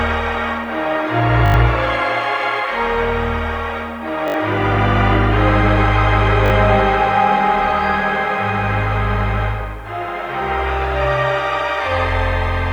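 A grainy, gritty edge runs through the whole clip, thickening on quiet passages where the sound roughens, with the error sitting about 40 dB below the signal. It is likely low bit depth without dither, consistent with rounding to around 9 bits.

At 1.46 to 1.54 s, a rapid stutter buzzes as one tiny fragment sounds repeatedly with hard joins. This is a repeated buffer: fresh audio arrived late, so the same block, which fits a 20 ms buffer, was replayed, dropping roughly 70 ms of material.

The same repeated-buffer stutter returns at 4.28 to 4.34 s, again losing roughly 70 ms, and at 6.46 to 6.50 s, where it is briefer, with about 40 ms missing.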